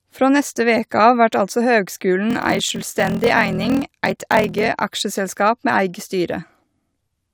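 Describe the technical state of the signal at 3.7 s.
Block size mismatch (padded) runs from 2.28 to 4.68 s, starting just after "av vert altså høgskulen". Each 1024-sample block arrives short of what the next stage reads, so zeros fill the remainder, producing a 41.7 Hz buzz while speech slows to 0.889 times speed with its timbre unchanged.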